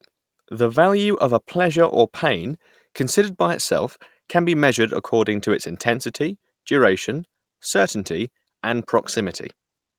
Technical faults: none

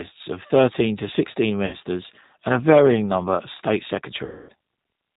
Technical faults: G.729 codec; VoIP packet loss concealed by the speech codec

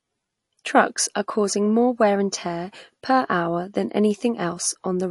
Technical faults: MP3 compression

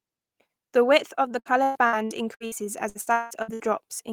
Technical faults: repeated packet loss (robotic sound)

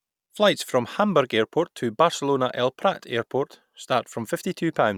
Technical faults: none

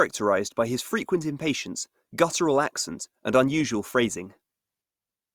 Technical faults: none

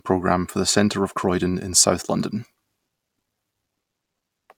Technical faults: none

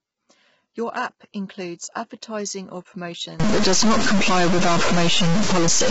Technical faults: low-delay AAC compression; stuck bit

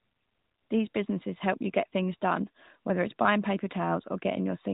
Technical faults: none

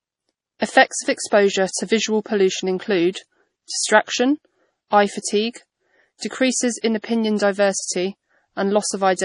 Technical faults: low-bitrate audio saved at a high bitrate

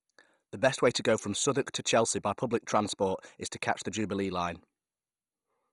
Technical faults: MP2 compression

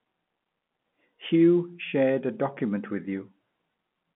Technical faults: none

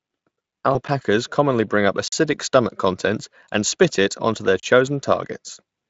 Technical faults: VoIP packet loss concealed by the speech codec; block of digital silence

